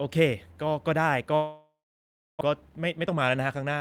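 From 1.35 to 2.43 s, a long network dropout likely stopped packets arriving. The receiver stretched the last sound into a fading buzz, then near silence, and roughly 0.6 s is simply lost. From 2.54 to 3.78 s, a jitter buffer speed-up removes short pitch-period pieces to shed excess delay, so speech runs about 13% faster at unchanged pitch and sounds hurried.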